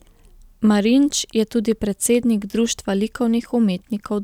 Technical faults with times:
none

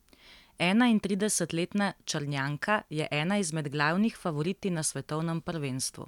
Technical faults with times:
none

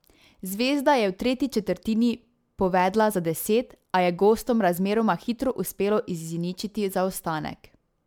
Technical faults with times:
0.00-8.07 generation loss
0.00-8.07 sample clock jitter

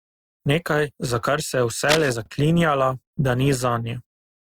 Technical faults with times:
1.85-2.10 cable scratch noise

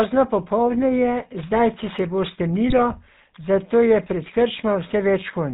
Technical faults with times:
0.00-5.53 GSM full-rate codec
2.70-2.83 GSM bit errors

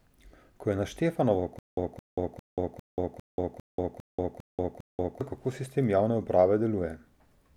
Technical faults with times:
1.59-5.21 stutter with silent gaps

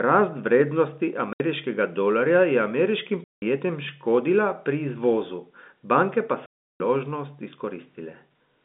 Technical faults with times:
1.33-1.40 packet loss filled with silence
3.24-3.42 packet loss filled with silence
6.46-6.80 packet loss filled with silence

